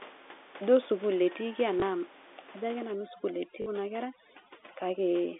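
At 1.8 s and again from 3.62 to 3.66 s, packet loss with the last packet repeated leaves gaps filled by replaying the previous packet, about 20 ms and then 40 ms. The first sounds like a small blip and the second like a short robotic stutter.

From 2.91 s, right after "ajo ake", to the end, overdone noise removal cuts frequency bands hard wherever they sit near the estimated noise floor, taking quiet speech detail with them. The room noise, about 22 dB below the speech, drops and breaks up into twinkling specks.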